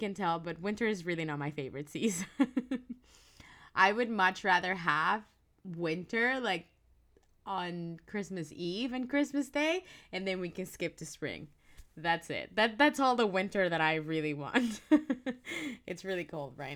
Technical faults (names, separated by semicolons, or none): crude rate conversion